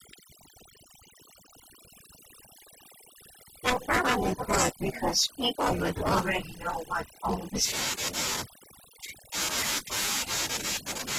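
A speech recording with overdone noise removal running the whole way through. The noise reduction was pushed too hard, so the background drops and breaks up into little twinkling specks, and the quieter parts of the voice get gated out along with the noise.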